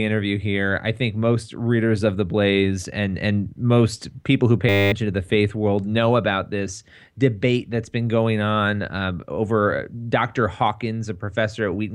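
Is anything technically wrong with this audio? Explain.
Yes. A system hang loop occurs from 4.69 to 4.92 s, after "and most people who". A frozen system replays one 10 ms buffer, producing a steady 100 Hz buzz. Roughly a fifth of a second of speech is lost.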